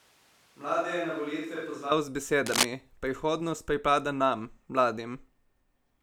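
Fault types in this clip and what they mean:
Switch to a distant microphone: From the very start until 1.91 s the speech sounds roomy and hollow, thin in the bass, roughly 10 dB quieter, with audible background noise, then snaps back to a close, full sound. The close microphone's feed was likely missing, leaving a farther one.
Cable scratch noise: From 2.46 to 2.65 s a burst of rough, uneven scratching and rustling sits over the speech at about its own loudness. A worn cable, connector or control was likely moved, making its contact resistance flicker rapidly and inject noise.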